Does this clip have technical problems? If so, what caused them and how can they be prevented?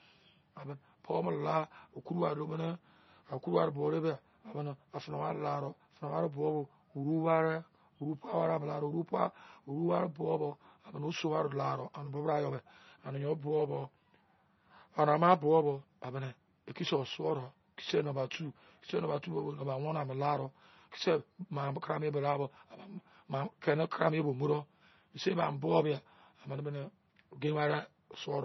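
Yes, heavy MP3 compression runs throughout this speech, likely from a very low bitrate, around 24 kbps: nothing above 6 kHz, plus watery, swirly artefacts on s sounds. Encoding at a higher bitrate would prevent it.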